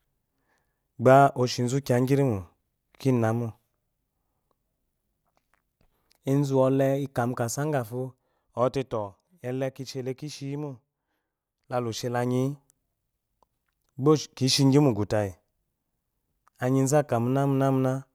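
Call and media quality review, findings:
Zipper noise, 7.71–8.93 s (after "ezuwole ika mu kasa") and 11.86–12.74 s: ticking rides on speech during a roughly 10 dB drop, then a similar rise. Gain stage stepping in 1 dB increments, around 7 and 10 steps per second, unsmoothed. Clicks, unlike a clean fader ramp.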